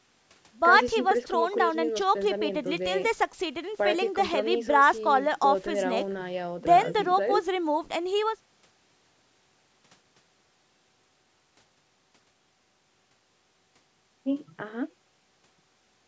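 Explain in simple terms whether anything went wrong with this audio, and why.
Nothing stood out on listening to this speech recording; the only processing is the usual call-microphone filtering that trims away the very lowest bass, which is normal.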